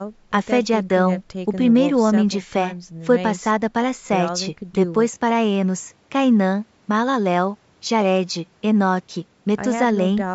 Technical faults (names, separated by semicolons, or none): none